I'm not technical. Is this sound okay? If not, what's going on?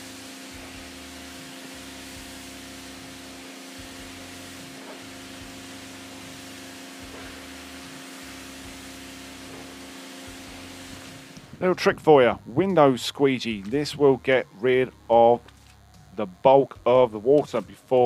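No. A faint, thin, steady buzz runs underneath the whole recording. This is DECT cordless phone buzz: a nearby cordless phone or its base sends tiny radio bursts 100 times a second, and the recording equipment picks them up as a hum.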